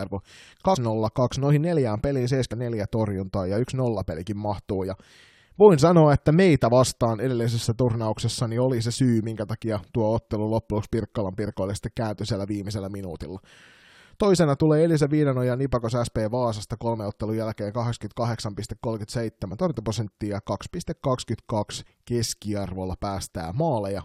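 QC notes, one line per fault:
0.75 s, 2.51 s and 21.85 s, compressed frames skipped: the audio jumps ahead three times. The first jump loses roughly a tenth of a second, and the other two lose about 150 ms each. At 2.51 s it happens between "noihin neljään peliin" and "torjuntaa ja yksi nollapelikin". Whole codec frames of about 23 ms never made it to playback, so a few in a row vanish.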